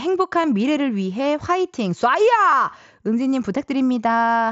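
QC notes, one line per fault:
0.44 s and 2.52 s, concealed Bluetooth headset packet loss. Each is a single brief gap of about 7.5 ms, which fits one lost mSBC frame. The receiver patched it with a matching stretch of recent waveform. So each is only a faint blip, almost hidden.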